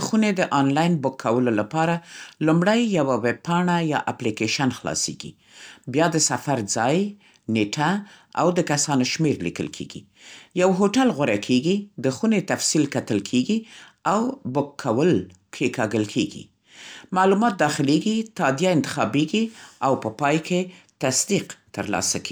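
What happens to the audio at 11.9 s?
Nothing goes wrong at 11.9 s: the speech carries on intact through that moment, with no dropout, click or distortion.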